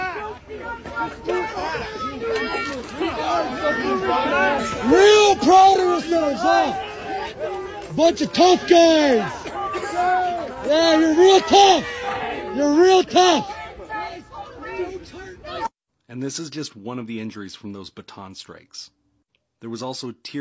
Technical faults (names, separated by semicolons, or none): none